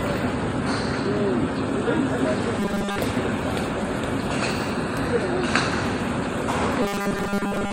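A recording of everyday sounds with robotic sound from repeated short buffers, from 2.60 to 2.98 s and again from 6.82 s to the end. Both stretches turn rigid and metallic, with a fixed 200 Hz buzz. The likely cause is audio arriving too seldom, so the software loops the last fragment, one consistent with a 5 ms buffer, for most of each stretch while the real sound is skipped.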